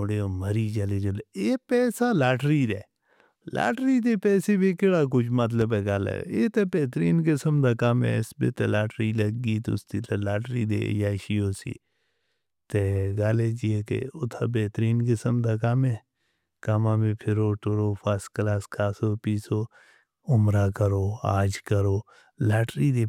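At about 5.61 to 5.65 s there's a single loud pop sitting on top of the speech, which just keeps going underneath it. It's a short, sharp thump, a few dB louder than the talking around it, so it jumps out. What you're hearing is a quick voltage pulse getting into the signal chain, likely from a plug, a switch, static or a driver hiccup, with the downstream circuitry smearing it into that brief thud.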